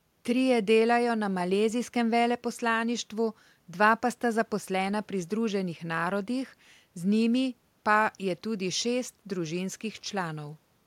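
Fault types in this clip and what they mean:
Nothing to flag here: the speech comes through without any audible technical faults.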